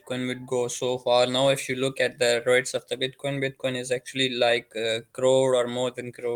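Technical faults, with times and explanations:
No technical faults are present in this clip. The Opus voice compression on the speech sounds like hybrid coding at a rate around 24 kbps, keeping the full band and leaving only light coding traces.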